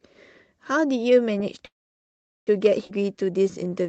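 At 1.65 s the speech stops and the last sound carries on briefly as a fading buzz, then goes quiet for most of the stretch to 2.49 s, roughly 770 ms of near-silence within an 815 ms hold. When sound returns it resumes exactly where it left off, with nothing lost. This is a call audio freeze, likely caused by packets stalling in transit until the jitter buffer ran dry, so the receiver padded the gap and everything afterwards plays about 815 ms late.

Between 2.87 and 2.91 s the speech lurches forward. There is only a tiny join, about 18 ms, but roughly 0.4 s of speech is gone, and the sounds on either side are spliced almost directly together. This is a skip ahead. Audio that should have filled that span was discarded, either dropped on the way or thrown out by the jitter buffer to shed built-up delay, while later audio was already queued and ready to play.

From 3.01 s to the end, the speech drags at about 85% speed. 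The pitch stays where it was, but sounds are stretched out, adding 142 ms in all. This is a jitter buffer slow-down. The buffer was low on reserve or had just raised its target delay, so it repeated individual pitch periods and slivers of pauses many times over to build a cushion. All of this comes through an Opus call path whose top end stops at 8 kHz.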